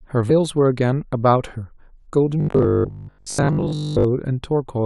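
At 0.3 s, damaged data in the compressed stream makes the decoder lose frame sync and resync on a later header, giving a brief glitch. From 2.41 to 4.05 s the speech turns into robotic sound, a rigid metallic buzz at about 50 Hz, likely from repeated 20 ms buffers standing in for most of the missing audio.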